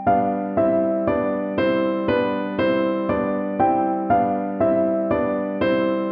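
Nothing is technically wrong with this audio.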